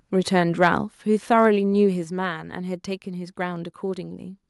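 At 0.64 to 0.68 s there's microphone overload. Peaks run about 2 dB past the converter's limit, so a couple of percent of samples get flattened, giving the loud syllable a gritty crackle. That's likely an input level set too hot for the converter. Around 1.02 s the microphone volume is stepped down, with everything dropping about 4 dB in one go, likely the call software reacting to that clipping. It overloads again at 1.39 to 1.47 s, peaks sitting right at the limit with that same crunch, and then another 4 dB step down lands at 2.04 s.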